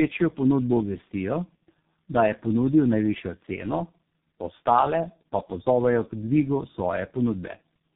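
Throughout, the speech passed through three speech codecs in a row, decoded and re-encoded at each link, which fits a chain ending in G.723.1. This tandem speech coding compounds the damage, leaving rough, warbly, muffled speech with nothing above 3.7 kHz.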